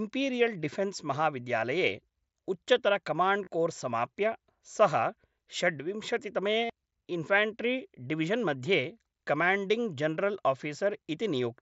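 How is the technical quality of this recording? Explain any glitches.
Three short dropouts from concealed Bluetooth headset packet loss are the only glitches, heard over the narrowish, faintly grainy sound of the mSBC headset codec, which tops out around 8 kHz. They fall at 3.45–3.47 s, right before "कोर्स् समाप्य सः", at 5.58 s, and at 6.65–6.70 s. Packets between headset and phone went missing, and the phone filled each gap by looping the best-matching slice of the last 20 ms or so. The 45 ms gap, which fits about six lost frames, turns into a brief buzzy hold with a little warble as real audio resumes.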